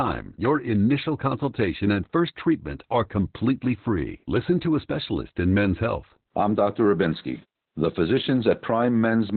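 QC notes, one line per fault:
Throughout, Opus voice compression: an 8 kbps narrowband SILK encode codes excitation coarsely and drops everything above 4.4 kHz, leaving speech muffled, hoarse and faintly robotic.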